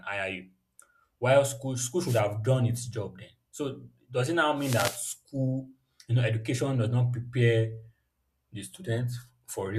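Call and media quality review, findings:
Wireless microphone noise hits at 2.05–2.21 s and 4.56–5.03 s: static swish over the speech from RF fade in the analogue FM link. Noise fills the gap rather than leaving silence, unlike packet loss.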